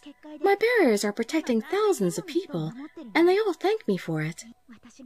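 Nothing technical stands out in this audio; there's no fault to point to anywhere in it.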